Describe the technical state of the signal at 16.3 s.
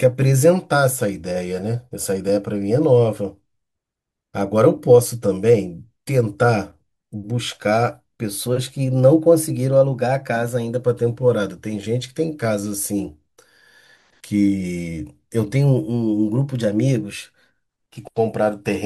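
At 16.3 s the speech sits inside a drift correction step running from 15.56 to 18.00 s. It is played about 5.6% fast and about 95 cents sharp, nearly a semitone, then snaps back, likely a clock-matching rate jump. A spectrogram shows every harmonic stepping up together and dropping back at 18.00 s.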